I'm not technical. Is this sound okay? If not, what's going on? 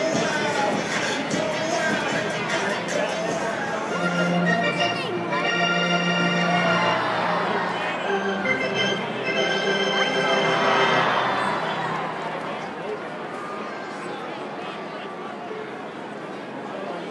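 Yes, this sound is okay. Nothing in it points to a technical problem that needs fixing.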